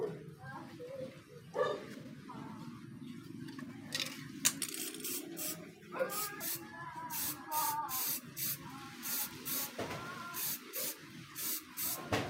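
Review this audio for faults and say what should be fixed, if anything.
Likely mis-clocked in playback, a section at the wrong speed runs 1.21 times fast from 4.61 to 6.41 s, raising pitch about three semitones. To prevent it, make every stage of editing and playback run at the same sample rate, so each section plays back at the speed it was recorded.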